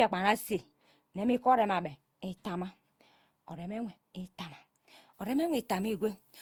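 Speech with generation loss running through the whole recording. The sound is swirly, smeared and hollow, with blurred onsets and a grainy noise floor, more degraded than a single lossy pass would leave. The likely cause is about five successive Opus encode-decode passes at around 64 kbit/s, each quantising on a shifted frame grid so the errors accumulate. From 5.14 s to the end at 6.41 s, pre-emphasis is left on. Treble is raised by about 14 dB at 10 kHz relative to 1 kHz, making the speech thin, bright and sibilant, which fits a 75 µs FM emphasis curve applied without its matching de-emphasis.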